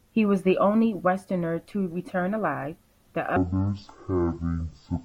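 A speech recording that goes wrong near its end. From 3.36 s to 5.05 s the audio drops to half speed and sounds a full octave lower, about 12 semitones down. This is stereo read as mono. The left and right samples are interleaved, but they are being read in sequence as one channel. Each moment of sound therefore takes twice as long to play. A fainter mirrored copy of the sound also shows up in the upper half of the spectrum.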